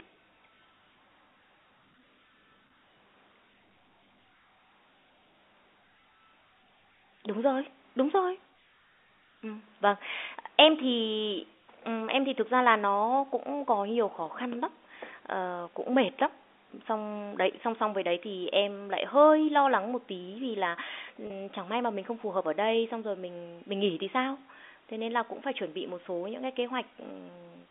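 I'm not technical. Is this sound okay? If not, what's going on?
No. Twice, at 2.67 s and 21.27 s, a small piece of the speech went missing in transit, a packet loss with pitch repetition. The receiver filled each 30 ms gap by repeating the last bit of voice, which sounds like a brief buzzy hold.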